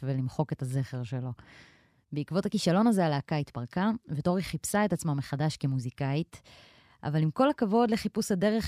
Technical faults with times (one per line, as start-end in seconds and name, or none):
none